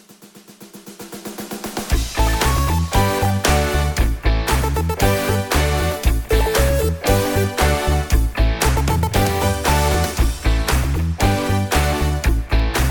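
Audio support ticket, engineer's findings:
Clock drift buffer slips: likely unsynchronised device clocks, roughly 500 ppm apart. Small blocks dropped or repeated every 0.67 s, heard as regular clicks from 0.58 to 12.60 s.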